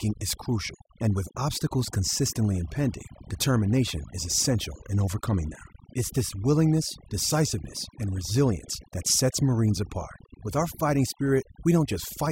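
From start to finish the speech carries overdone noise removal. A noise reduction stage was pushed too hard, so any frequency band sitting near its noise estimate gets pulled far down or removed, taking the quieter parts of the voice along. Between phrases the background collapses to near silence dotted with twinkling specks. A spectrogram shows scattered isolated dots in the gaps and ragged, holed harmonics.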